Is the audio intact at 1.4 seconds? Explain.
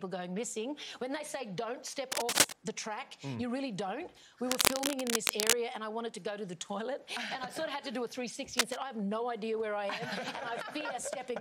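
Yes, at 1.4 seconds the audio plays through cleanly, with no dropout, click, distortion or other fault audible at that moment.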